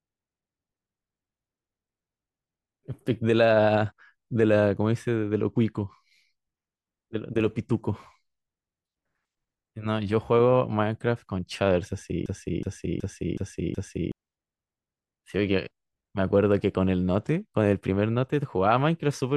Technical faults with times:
12.26-14.12 system hang loop

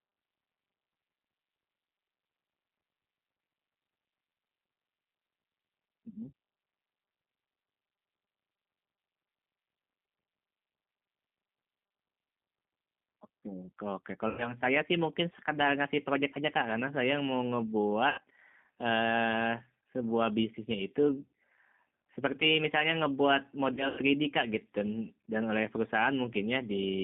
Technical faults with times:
0.00-27.04 G.729 codec
14.29-14.53 VoIP packet loss concealed by the speech codec
18.09-18.21 VoIP packet loss concealed by the speech codec
23.74-24.00 VoIP packet loss concealed by the speech codec

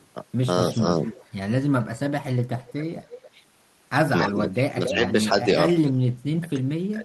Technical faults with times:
0.00-0.07 echo leak
0.71-1.84 echo leak
2.61-3.29 echo leak
4.22-4.94 echo leak
4.32-7.04 speech suppressed in double talk
5.73-5.88 echo leak

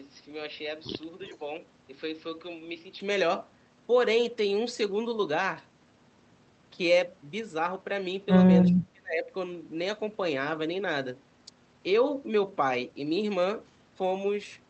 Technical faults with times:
0.00-3.00 input switched to a poorer device
1.25-1.36 echo leak
8.70-9.31 speech suppressed in double talk

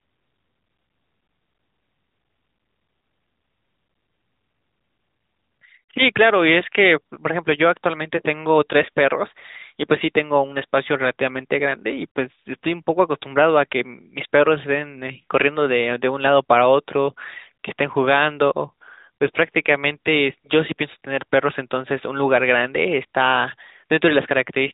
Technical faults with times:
none

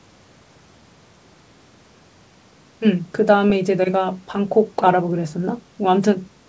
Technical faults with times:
none

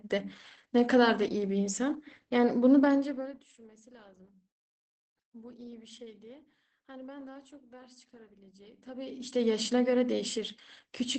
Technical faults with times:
0.00-11.19 Opus voice compression

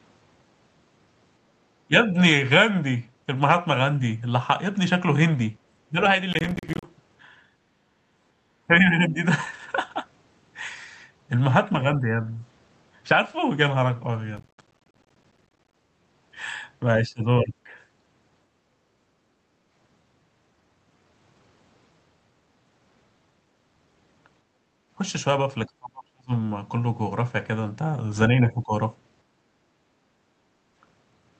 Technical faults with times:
1.87-1.94 speech suppressed in double talk
5.88-12.40 speech suppressed in double talk
6.33-6.84 processor overload crackle
14.37-15.74 processor overload crackle
17.03-17.70 speech suppressed in double talk
19.05-19.64 background gated by the echo canceller
24.45-24.89 background gated by the echo canceller
25.66-28.76 speech suppressed in double talk
29.37-30.74 background gated by the echo canceller

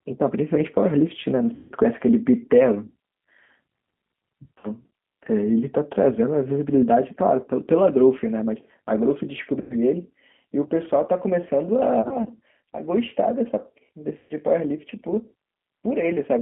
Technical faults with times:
0.00-16.41 G.729 codec
1.55-1.73 VoIP packet loss concealed by the speech codec
4.58-4.68 VoIP packet loss concealed by the speech codec
9.61-9.76 VoIP packet loss concealed by the speech codec
12.02-12.29 VoIP packet loss concealed by the speech codec
14.18-14.33 VoIP packet loss concealed by the speech codec

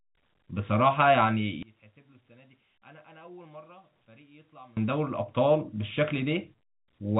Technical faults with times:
1.63-4.77 one channel inverted

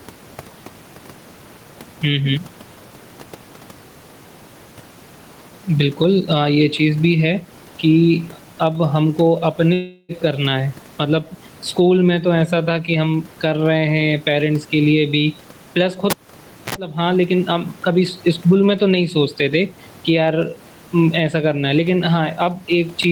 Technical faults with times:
0.00-23.12 gain pumping
9.73-10.12 long network dropout
16.10-16.75 cable pulled and plugged in

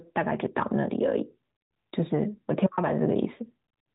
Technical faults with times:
none

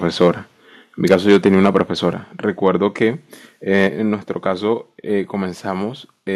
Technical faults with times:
0.21-0.30 microphone overload
1.05-1.81 microphone overload
1.14 microphone volume stepped down
2.13 microphone volume stepped down
2.66-2.68 microphone overload
3.74-3.87 microphone overload
3.87 microphone volume stepped down

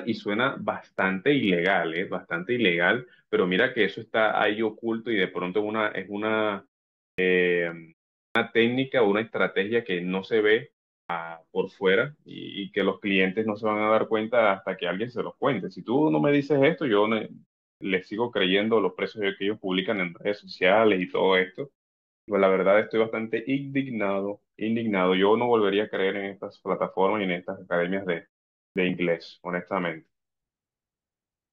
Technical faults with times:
7.11-7.18 clipped start after a pause
8.28-8.35 clipped start after a pause
11.03-11.10 clipped start after a pause
17.73-17.81 clipped start after a pause
22.21-22.28 clipped start after a pause
28.69-28.76 clipped start after a pause

